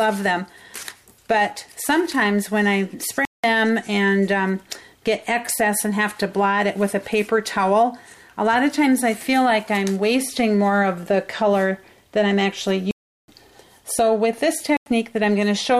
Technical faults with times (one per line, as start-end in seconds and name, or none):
3.25-3.44 block of digital silence
12.91-13.28 block of digital silence
14.77-14.86 block of digital silence